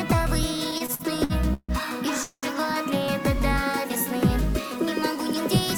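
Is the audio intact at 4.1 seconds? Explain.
Yes, the audio is intact at 4.1 seconds, with no fault present at that moment.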